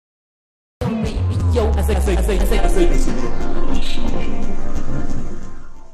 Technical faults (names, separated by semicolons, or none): cut-off start